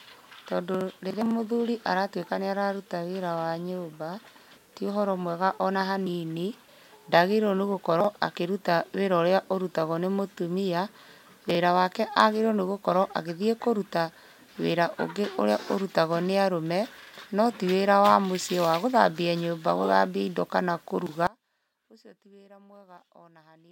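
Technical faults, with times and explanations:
21.27 s to the end: audio dropout to a faint residue. Right after "gũthambia indo kana kũruga" the speech just drops away mid-flow and never comes back, leaving only faint sound, something like 25 dB below where it was. It's a hard cut, not a pause or a fade, and the fact that something still trickles through tells you the path downstream stayed live. The likely cause is the feed being lost upstream while the later stages kept passing along whatever leaked through.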